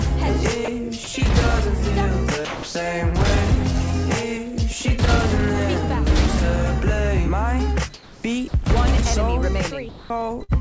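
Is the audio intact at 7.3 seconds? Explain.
Yes, the audio is intact at 7.3 seconds; it passes through the call path with its G.722 coding and nothing above 8 kHz, and no fault occurs at that moment.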